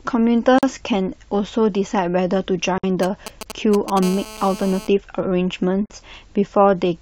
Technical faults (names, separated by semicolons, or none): gap at a join of encoded pieces; GSM signalling bursts; GSM phone buzz